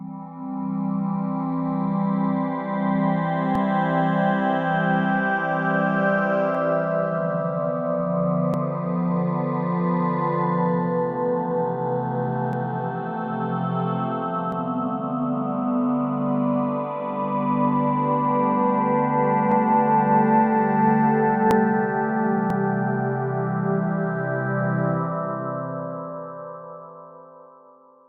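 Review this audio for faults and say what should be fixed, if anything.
You've got overlap between stream segments here: tiny clicks or skips at 3.55, 6.55, 8.54, 12.53, 14.52, 19.52, 21.51 and 22.50 s. Each lands on a boundary between the 1-second segments, where the timestamps of neighbouring chunks overlap slightly. The player trims that overlap even though the sound wasn't actually duplicated, so 2 to 4 ms of real audio disappears and the waveform jumps. To prevent it, fix the segmenter so segment timestamps abut exactly with no overlap.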